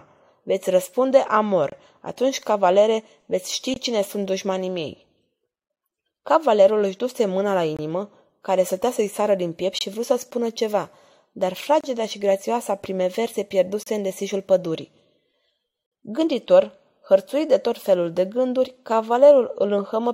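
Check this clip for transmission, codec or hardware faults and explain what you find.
Eight gaps between stream segments cut hard-edged silences into this speech: the segment timestamps don't quite meet every 2 s, so the player pads each join with silence, though nothing is lost. Holes of about 24 ms at 1.70 s, 21 ms at 3.74 s, 10 ms at 5.76 s, 23 ms at 7.77 s, 24 ms at 9.79 s between "sară din piept" and "vrut să spună ceva", 30 ms at 11.81 s after "să spună ceva dar", 32 ms at 13.83 s before "în desișul pădurii", and 56 ms at 15.86 s.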